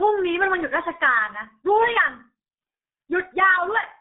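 Throughout, the speech carries heavy G.723.1 codec damage: nothing passes above 3.8 kHz, and slow 30 ms frame updates leave it muffled and hoarse, with smeared consonants, fitting a roughly 6 kbit/s stream.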